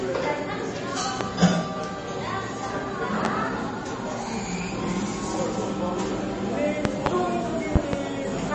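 Throughout, the sound has a watery, swirly edge from MP3 compression, likely at a bitrate around 32 kbps. A spectrogram shows a hard ceiling at 8.3 kHz with speckled, flickering gaps below it.

Loud pops, likely from electrical voltage spikes, occur at 1.21–1.24 s and 3.25–3.28 s, with double pops at 6.85–7.09 s and 7.76–7.96 s. They rise well above the sound, the 6.85 s pair louder. On the waveform they appear as sharp isolated spikes, and on a spectrogram as thin vertical lines.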